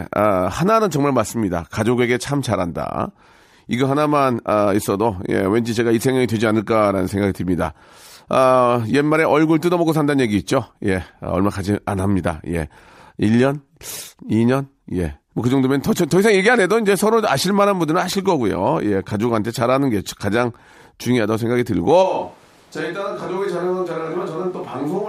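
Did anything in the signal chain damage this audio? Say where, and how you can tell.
Yes. A switch to a distant microphone at 22.04 s makes the speech abruptly hollow and roomy, about 5 dB quieter and noisier to the end. The likely cause is the close microphone dropping out at capture.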